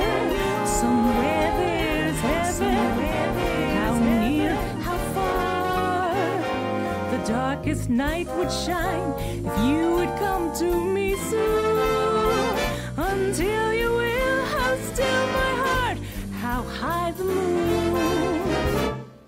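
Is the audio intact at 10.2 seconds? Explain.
Yes, the audio is intact at 10.2 seconds, with no dropout, click, distortion or other fault at that point.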